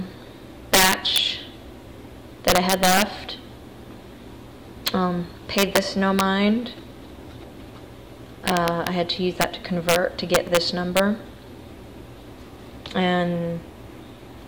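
Integer overflow runs through the whole clip: the signal is driven about 11 dB past full scale, and instead of being limited, the few samples that exceed the integer range wrap to the opposite sign. Each loud peak therefore flips across the full range, producing violent cracks far harsher than ordinary clipping.

At 6.67, 10.47 and 12.67 s there are single sharp clicks, each a thin vertical line across the spectrum. These are likely dropped samples, with well under a millisecond of audio missing each time, so the waveform jumps abruptly to a later value without any audible gap.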